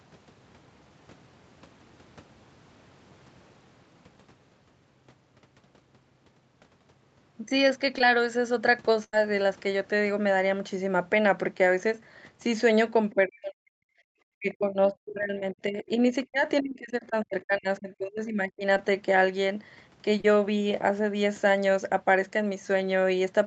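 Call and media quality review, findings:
Short concealed packet loss at 7.98–8.01 s, 18.76 s and 20.21–20.25 s. Brief smears or wobbles, the longest about 30 ms. The decoder had nothing for those moments, so it extended the preceding sound and crossfaded back. At 18.76 s almost nothing got patched in, so it's more a tiny dropout than a smear.

Burst of packet loss at 9.04–9.17 s. Roughly 80 ms never arrived. The receiver stretched the last sound out, fading, for most of the gap, then jumped ahead. A few milliseconds of real audio are simply gone at the rejoin.

Other side's voice leaking through at 13.10–13.14 s. A faint scrap of a second talker, about 30 dB under the main speech. It's likely residual loudspeaker echo the canceller didn't fully subtract from the mic feed. It's short and quiet.

Speech suppressed in double talk at 13.14–13.79 s and 14.38–18.65 s. The main talker ducks hard, around 40 dB at worst in the first stretch and about 30 dB in the second, for roughly half a second and then about 3 s in total. 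The likely cause is the echo canceller misreading overlapping talk as echo and clamping everything. The whole path also tops out around 8 kHz, consistent with wideband Opus.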